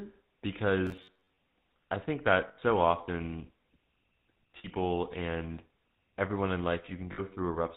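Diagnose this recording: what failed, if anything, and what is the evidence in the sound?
The whole thing has gone through the GSM full-rate codec at 13 kbps, and the damage is plainly audible: a gravelly, buzzy roughness on the speech and nothing above 4 kHz. That's the codec stage, with its pulse-driven vocal-tract model throwing away much of the excitation detail.

From 0.86 to 1.38 s the speech goes rigid and metallic, locked to a buzz near 94 Hz, with roughly half the audio getting repeated. That's likely the driver or buffer stage starving and looping its last chunk. A roughly 10.7 ms repeat gives exactly that pitch.

At 2.48 s there's a rough metallic hold for about 100 ms, then shorter ones of 60 ms at 4.58 s and 7.12 s. These are lost GSM frames on the network side. The decoder keeps replaying the last good frame's settings, which fits runs of 20 ms frames.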